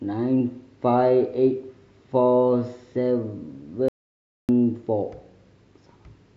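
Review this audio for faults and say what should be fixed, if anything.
Audio dropout to silence from 3.88 to 4.49 s: the speech stops abruptly mid-flow and the signal falls to silence for about 0.6 s, with no room tone or background left underneath, before resuming just as suddenly. Whatever was spoken in that stretch is simply missing. The cause is likely a momentary loss of the input, such as a loose connection, a dropped link or a brief mute, while recording carried on writing silence. To prevent it, secure cables and wireless links, disable auto-mute features, and monitor the input live during recording.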